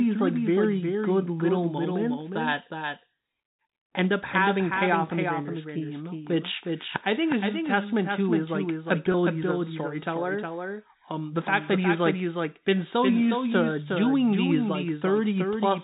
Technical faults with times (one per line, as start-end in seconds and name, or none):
0.00-15.84 doubled audio track
9.12-9.14 packet loss with pitch repetition